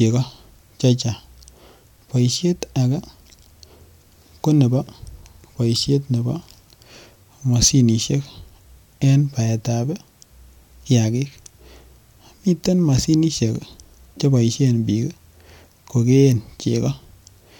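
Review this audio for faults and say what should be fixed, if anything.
Nothing here needs fixing; I listened through the whole speech recording and heard no faults at all.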